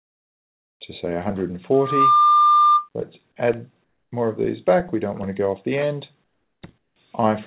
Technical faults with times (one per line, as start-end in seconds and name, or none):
1.73-2.89 loudspeaker feedback squeal
3.84-4.12 comfort noise in place of the background
6.78-6.96 comfort noise in place of the background